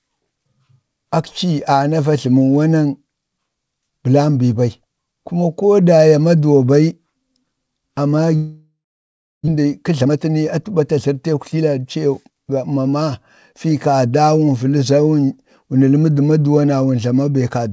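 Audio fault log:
8.36–9.49 s, long network dropout: audio stops arriving, likely from the network, and the last sound is stretched into a fading buzz before about 0.66 s of silence. Roughly 0.6 s of the speech never returns, unlike a brief gap where concealment bridges everything.
9.57–13.03 s, jitter buffer speed-up: the speech runs about 13% faster at unchanged pitch as the receiver trims pitch-period slices to shed roughly half a second of backlog after the dropout, so it sounds hurried rather than higher, unlike a resampling speed change.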